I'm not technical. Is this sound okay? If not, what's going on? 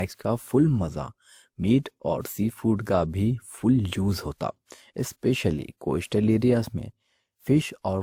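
No. Throughout the speech there's a compressed, processed quality, as if two different kinds of digital roughness were layered on top of each other. The likely cause is transcoding between lossy codecs: the recording seems to have been squeezed by one compression format, something like Opus, then squeezed again by another, something like WMA. The second pass wastes effort preserving the first one's flaws and adds its own, so both sets of artefacts are heard together.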